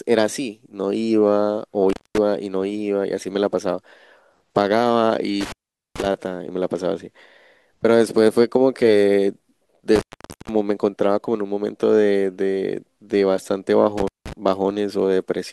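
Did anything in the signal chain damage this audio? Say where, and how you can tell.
Yes: intermittent contact in the analogue wiring, where a loose plug briefly opens. At 1.90, 5.41, 9.95 and 13.98 s the speech cuts out for 0.18 to 0.47 s, leaving faint hiss. The waveform collapses to near-flat, and the spectrogram shows vertical broadband crackle at each edge.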